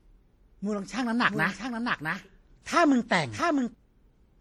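Throughout the speech, two different layers of compression smearing are heard together, likely from transcoding between lossy codecs, fitting an MP3 pass followed by WMA.

From 1.28 to 3.74 s, a dry, full-band copy trails roughly 0.7 s behind, about 5 dB quieter, cutting in and out abruptly: likely a doubled audio track.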